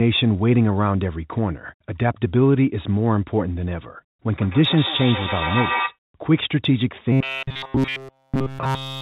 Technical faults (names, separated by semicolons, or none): feedback echo between two devices; robotic sound from repeated short buffers